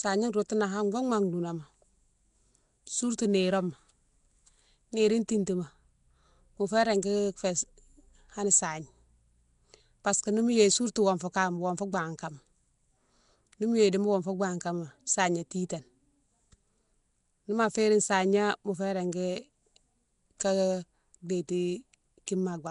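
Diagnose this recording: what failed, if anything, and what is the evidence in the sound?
The fault sits at the codec stage and runs through the whole speech clip. The sound is rough and hissy, with a smeared, underwater quality that is plainly audible. Nothing is present above 10.6 kHz. This is likely Nellymoser compression, the Flash microphone codec, at a rate that fits about 44 kbps. It spends a fixed two bits per sample on short blocks. Weak bands get no bits and are filled with noise, which produces the hissy halo around the speech.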